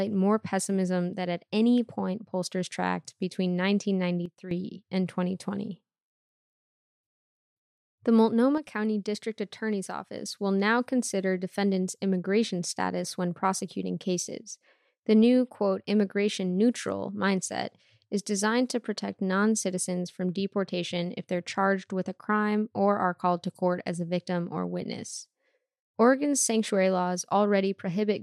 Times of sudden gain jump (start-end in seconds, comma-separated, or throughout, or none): 4.26-4.51, 8.58-10.18